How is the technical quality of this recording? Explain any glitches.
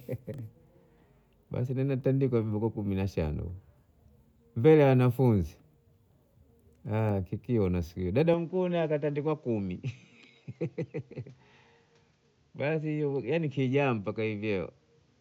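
The recording has one clear fault in its second half. At 8.34 s the input was likely switched to a poorer device, and that continues to the end. The new device passes nothing above 7.6 kHz, so the speech turns duller and boxier. The level drops by about 5 dB, a faint new noise floor sits roughly 45 dB below the speech, and the switch itself is instant, with no silence.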